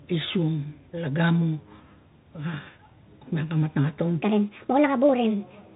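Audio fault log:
Throughout, Bluetooth CVSD headset codec: narrowband, scratchy s sounds over granular hiss, nothing above 3.8 kHz, from one-bit delta coding that fits a 64 kbps link.
4.22 to 5.75 s, section at the wrong speed: speech turns high and hurried, 1.42 times fast and about seven semitones up, likely from playback at the wrong clock.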